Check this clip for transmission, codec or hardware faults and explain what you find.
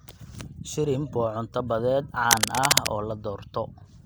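There's one fault here: cable scratch noise from about 2.30 to 2.87 s. A brief patch of dense, uneven scratching sits over the speech, at roughly the same loudness as the voice or a bit above it. That's likely a worn cable or connector being moved, with its contact resistance jumping around.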